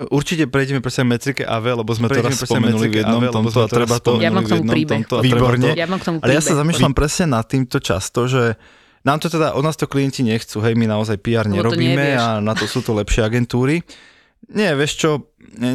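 From 2.00 to 6.86 s, a doubled audio track: the speech repeats about 1.5 s late at roughly equal level, likely a second capture path. The waveform and spectrogram show duplicated shapes, offset, starting abruptly.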